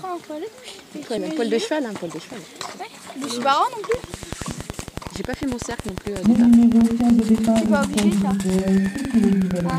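From 3.94 s to 9.71 s a train of clicks rides over the sound. About seventy near-identical pulses arrive at a steady 10.8 per second, peaking around 10 dB above the audio. They tick through the pauses too. The likely cause is interference from nearby equipment or a faulty connection or power supply.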